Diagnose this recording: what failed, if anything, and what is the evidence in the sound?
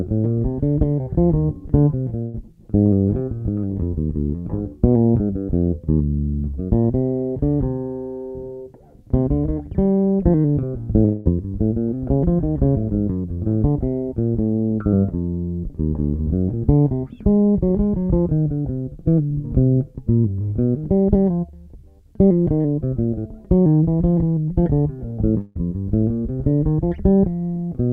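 Two bursts of packet loss on the network path, at 2.22–2.35 s and 25.41–25.56 s. In each, the receiver's concealment extends the last sound for 112 ms and 148 ms, turning it down as it goes (a held buzz if the sound was voiced, a fading hiss if not). The sound then resumes further on, about 120 ms and 140 ms later. On a spectrogram the preceding spectrum smears horizontally and darkens, then breaks abruptly into new content. The waveform envelope decays and then jumps.

At 11.05–11.27 s there is a longer gap, likely a long network dropout. The last sound is continued for about 207 ms and fades, without reaching silence, before the sound returns about 210 ms further along, with the material in between lost. It looks like the bursts, only wider: a stretched, dimming copy of the prior spectrum in the spectrogram, a tapering waveform, then a discontinuity where the signal picks up again.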